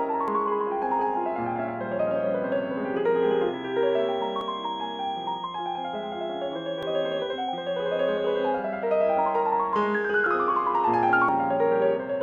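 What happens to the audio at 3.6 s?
At 3.6 s a feedback whistle is present, running from about 3.10 s to 8.57 s: a thin, steady tone near 3.3 kHz sitting roughly 20 dB below the sound and swelling and fading slowly in level. The likely cause is a loudspeaker-to-microphone loop held just at the feedback threshold.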